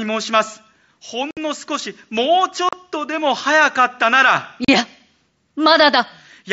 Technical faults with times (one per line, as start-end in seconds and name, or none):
1.31-1.37 unconcealed Bluetooth headset packet loss
2.69-2.73 unconcealed Bluetooth headset packet loss
4.65-4.69 unconcealed Bluetooth headset packet loss